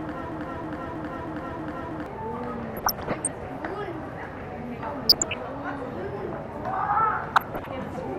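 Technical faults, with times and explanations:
throughout: MP2 compression, likely from low-rate MPEG Layer II coding near 80 kbps. Upper sub-bands drop out and flicker, and the remaining bands are coarsely quantised, so the sound is dull with a granular, gurgling edge that stays plainly audible.
0.00–2.06 s: broken-record loop, already under way when the clip starts. A fragment of about 0.32 s repeats exactly, back to back, five times. This points to a stalled player or stream that kept resending its last buffered piece, and the audio due in that span is lost.
2.72–3.27 s, 5.01–5.40 s, 7.28–7.68 s: DAB burbling. Weak reception let bit errors of around 0.5 to 0.7 percent past the error correction into the audio data. Corrupted samples put short blips of noise in single sub-bands, and corrupted scale factors make sub-bands jump in level for up to a frame.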